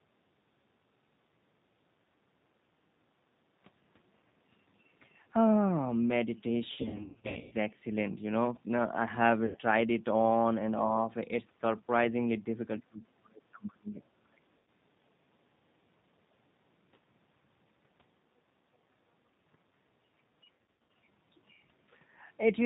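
The whole call runs through the G.729 codec at 8 kbit/s, which discards the real waveform and rebuilds the speech from a vocal-tract filter, a pitch predictor and a few pulses per 10 ms frame. Everything above 4 kHz is gone, so the voice sounds muffled and boxy. The codec damage is plainly audible as a rough, slightly synthetic texture on the speech.

At 3.04 to 3.15 s the echo canceller clamps down on the microphone while the loudspeaker is active. This is background gating by the echo canceller. For roughly a tenth of a second the room sound sinks by about 12 dB, leaving a brief hollow gap before the ambience returns.

Packets go missing from 6.73 to 7.53 s, and the G.729 decoder conceals the loss by extrapolating from its last pitch and filter state with falling gain. About 540 ms is lost, scattered across 780 ms, with the longest continuous run 120 ms. The speech smears into a buzzy tone or coloured noise that fades, and it stays weak and distorted after good packets resume. 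The same concealment of VoIP packet loss recurs at 9.46 to 9.59 s and at 14.58 to 14.68 s, with 90 ms lost each time. It recurs again at 20.53 to 20.90 s, where 270 ms is lost across 360 ms with runs up to 90 ms. Each time the words are stretched into a buzzy tone or coloured noise that fades, then recover gradually.

From 12.89 to 13.92 s the talker's level drops hard in chunks, by roughly 30 dB at worst and for about 700 ms in all. This is speech suppressed in double talk, likely caused by the echo canceller failing to separate the local voice from the far-end echo and attenuating both. A second, shorter suppression follows at 14.23 to 14.45 s, cutting roughly 35 dB for about 200 ms.

Between those two suppressions, at 13.99 to 14.04 s, a faint scrap of the other side's voice leaks through, roughly 35 dB below the talker. The canceller has likely left part of the loudspeaker playback in the microphone signal. 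It comes through as a fragment lasting only an instant.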